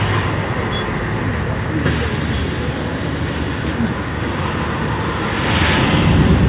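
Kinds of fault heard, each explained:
No kinds of fault are heard in this sound, so none need explaining; its passage through the G.711 mu-law call path simply leaves nothing above 4 kHz.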